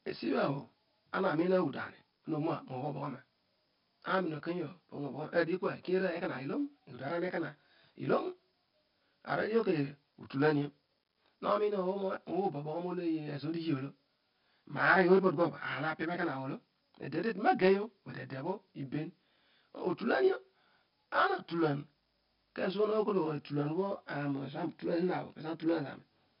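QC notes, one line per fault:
Throughout: channel delay (comb filtering). One channel runs about 20 ms late and sums to mono, cutting dense fixed notches from around 20 Hz upward, so the speech sounds rough and slightly doubled.
Throughout: 4-bit ADPCM compression. Heavy level-tracking gritty hiss and distorted attacks come from coarse 4-bit prediction steps, which fits a 44 kbps stream. Nothing is present above 5.3 kHz.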